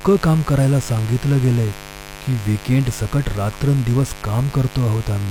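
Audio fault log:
Throughout, mains buzz: a steady, raspy buzz sits under the speech, roughly 20 dB below it, built on 50 Hz. Sharp switching spikes, twice per mains cycle, from a dimmer, rectifier or unshielded line, spread harmonics into the kilohertz range, giving the edge.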